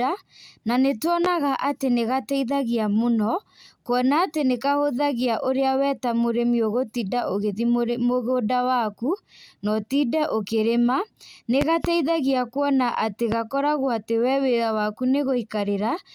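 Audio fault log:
1.25–1.28 s, 11.61–11.88 s, 13.32–13.35 s: loud pop. Single sharp pops at the first and last, a close pair in the middle, each peaking well above the speech, around 15 dB, likely from a voltage pulse such as static or a switch. Unlike a dropout, the speech carries on underneath.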